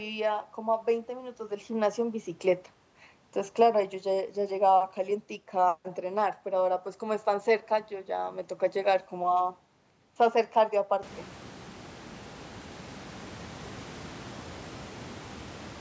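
No technical faults are audible in this speech: the call microphone processing caps the band at 8 kHz as expected, and the room noise that rises by about 22 dB around 11 s stays about 20 dB below the speech.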